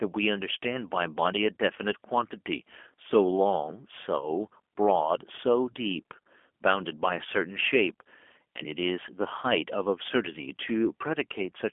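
Throughout, G.729 coding, fitting 8 kbit/s, leaves the speech rough and synthetic. A spectrogram shows energy confined to 250 Hz–3.4 kHz and blank above 3.6 kHz.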